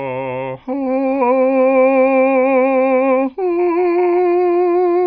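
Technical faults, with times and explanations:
The music signal shows no technical faults at any point.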